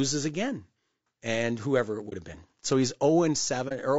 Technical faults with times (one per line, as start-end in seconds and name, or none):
0.00-3.98 low-delay AAC compression
2.09-2.13 AAC frame loss with muting
3.68-3.72 AAC frame loss with muting